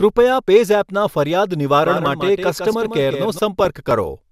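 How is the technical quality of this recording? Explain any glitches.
The recording has two audible faults.

From 1.85 to 3.39 s there is a doubled audio track. A second full-band copy of the speech runs around 150 ms behind the first and about 5 dB quieter. It carries no reverb tail or room colouring and cuts in and out abruptly at both ends. It is likely caused by the signal being picked up again through a slower path, or by an edit leaving two offset copies, which produces a distinct slapback echo.

From 3.60 to 3.68 s there is DAB burbling, consistent with weak digital radio reception. A small fraction of bit errors slipped past error correction into the MP2 stream: corrupted samples add short blips of noise in single sub-bands, and corrupted scale factors make sub-bands jump in level for up to a frame. The 76 ms span fits several consecutive damaged frames and is heard as a short burst of burbling over the speech.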